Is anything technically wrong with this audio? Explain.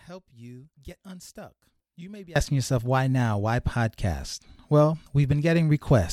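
Yes. From the start to 2.36 s, just before "yourself why now", the speech sounds faint and distant, about 24 dB quieter. The likely cause is one channel inverted: reversed polarity makes the shared centred content cancel in mono, leaving only the faint difference between channels.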